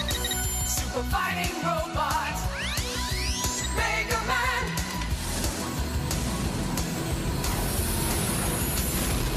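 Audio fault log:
No faults detected anywhere in the clip.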